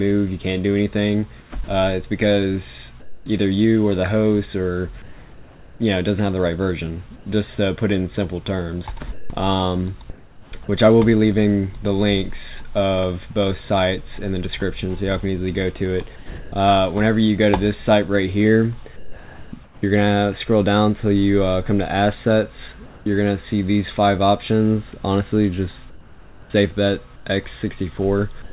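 The audio comes through a narrowband call path with nothing above 4 kHz, which fits G.711 mu-law at 64 kbps. From 1.4 to 10.52 s the sound is chopped by the voice detector. About 1.9 s in total is swapped for synthetic fill. The likely cause is a sender detector toggling transmission on and off, so the sound drops out in two or more holes. The sound is dropped by the voice detector three times: 16.16 to 16.52 s, 18.96 to 19.52 s, and 28.42 s to the end. Roughly 0.27 s and 0.32 s of real sound go missing in the first two, and about 0.07 s in the last. Steady noise replaces it, likely because the detector mistook quiet sound for background. Comfort noise in place of the background appears at 18.96 to 19.82 s, 22.86 to 23.06 s, and 25.9 s to the end. In the 22.86 to 23.06 s pause the real background, about 23 dB below the loud parts, turns into flat, featureless hiss at the same level. This is likely discontinuous transmission with receiver-generated noise.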